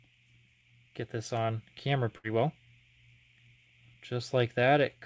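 From 2.18 to 2.27 s, a burst of packet loss: 60 ms goes missing, bridged by 56 ms of fading held sound, showing as smeared, decaying spectrogram bands, then an abrupt restart.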